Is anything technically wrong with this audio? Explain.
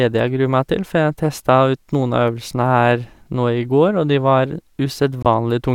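Yes. From 5.23 to 5.26 s, a corrupt frame was muted: the decoder rejected a damaged frame and substituted silence, leaving an abrupt 34 ms hole. The waveform shows a flat line and the spectrogram a full-band vertical gap, with timing preserved.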